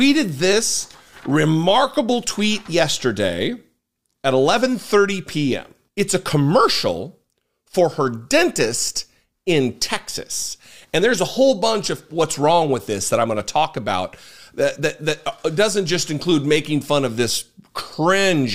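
No technical faults are audible anywhere in the recording.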